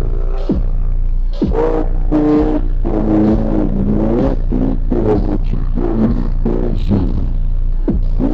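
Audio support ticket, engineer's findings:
Stereo read as mono, whole clip: playback at 0.5x speed, pitch down 12 semitones. Interleaved L/R samples consumed as one channel at decode/file-read stage. Faint mirror image in upper spectrum half separates it from plain sample-rate mismatch.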